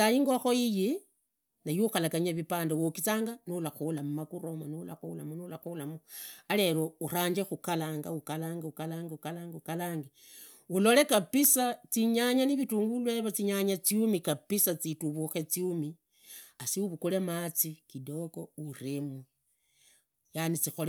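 At 3.98 s, between "niwe ukhalaganyanga vipande uwogizanga" and "mumagura yomo nurakhula", a sharp snap cuts across the speech. This is an electrical switching spike. A second one lands at 11.44 s, just before "zinyanga na vilunguru yevo". Each is a tight click, a few milliseconds long, peaking at about -30 dBFS. The likely cause is a nearby switch, motor or static discharge arcing, with the audio line picking up the burst.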